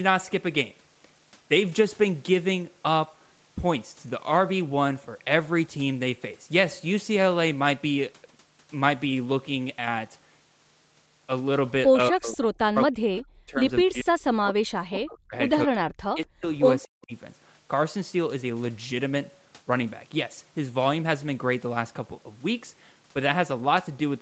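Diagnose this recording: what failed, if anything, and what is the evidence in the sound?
The failure sits in the call processing stage, and it is speech suppressed in double talk. The speech dips hard, by about 40 dB at its deepest, in five bursts: 11.97 to 12.42 s, 12.58 to 13.61 s, 13.84 to 15.35 s, 15.66 to 16.46 s and 16.84 to 17.13 s. The likely cause is an echo canceller that could not tell the near talker from loudspeaker echo while both sides spoke. It turned everything down. The audio stops near 8 kHz, as the call codec's bandwidth allows.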